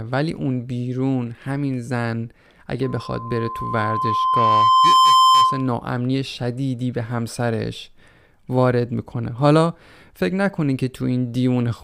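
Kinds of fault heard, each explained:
Loudspeaker feedback squeal: the microphone is hearing the loudspeaker it drives, and at one frequency the loop gain rises above unity, so that tone feeds on itself each time around. In this speech clip a pure tone at 1 kHz appears at 2.83 s, swells over roughly two seconds until it stands about 10 dB above the speech, and then stops at 5.74 s, as though the loop was broken or the gain pulled down.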